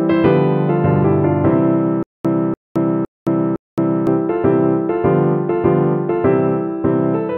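From 2.03 to 4.07 s there is a stutter with silent gaps. The same 292 ms fragment plays four times, each followed by 218 ms of digital silence, likely from a stalled stream replaying its last buffer. The waveform shows identical blocks between dead-flat lines, and the spectrogram shows repeated patches with blank columns.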